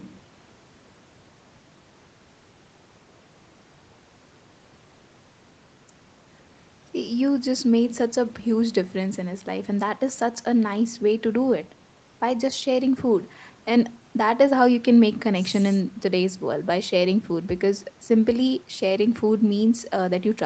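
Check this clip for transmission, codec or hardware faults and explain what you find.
No faults detected here.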